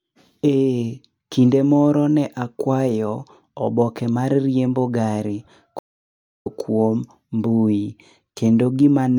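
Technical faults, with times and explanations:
5.79–6.47 s, stream reconnect: the speech cuts to silence for about 0.61 s while the connection drops and re-establishes. A fresh decoder then picks up mid-stream around 0.4 s further on, so a short stretch is skipped, and the first frame comes back faded in.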